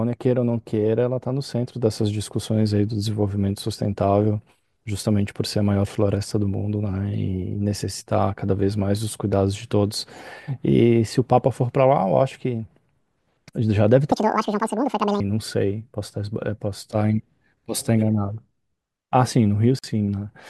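From 14.12 to 15.20 s the speech runs at 1.98 times its proper speed, a section at the wrong speed: pitch jumps around ten semitones while timing rushes to match. That coupling separates it from a pitch-shift fault, where rhythm stays put; the likely cause is playback against the wrong clock.

From 19.79 to 19.84 s a 48 ms gap at a join of encoded pieces cuts the speech with smeared edges, leftover encoder delay and end padding. Unlike a dropout, nothing is lost: the speech resumes exactly where it stopped.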